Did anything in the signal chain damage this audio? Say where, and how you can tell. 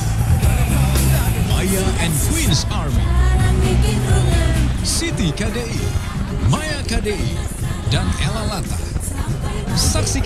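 No, nothing in the signal chain audibly damaged this audio.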